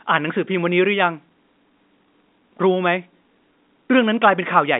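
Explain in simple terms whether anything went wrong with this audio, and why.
Nothing went wrong here.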